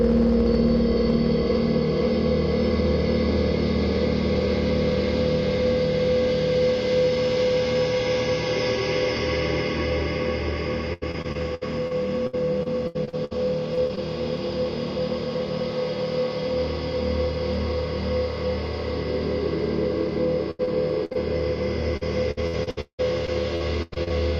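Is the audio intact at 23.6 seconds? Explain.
No. At 23.6 s the sound is choppy, with small pieces dropping out, because it falls inside a run of repeated packet loss from 21.97 s to 24.12 s. Over that stretch twelve gaps open one after another, about 660 ms of audio in all. Each hole is papered over by carrying the previous sound forward, so around 30 percent of the span is concealment rather than real audio. The longest gap lasts 178 ms.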